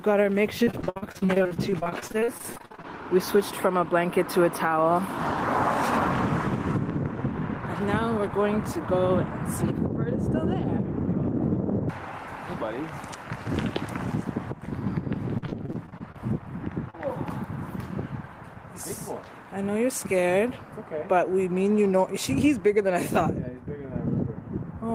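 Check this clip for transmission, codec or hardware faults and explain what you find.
Two kinds of network transmission fault are audible; no codec or hardware faults stand out.

Repeated packet loss (robotic sound) runs from 0.63 to 2.86 s and again from 15.38 to 16.16 s. Audio arrived with one hole after another, the longest around 60 ms, each patched by extending the preceding sound. About a third of the first stretch is filled-in material, giving choppy, clipped-off audio.

Short concealed packet loss occurs at 16.90–16.95 s. Roughly 40 ms failed to arrive in time, so the receiver continued the last sound across the hole before blending back into the real signal. It is heard as a brief smear or wobble.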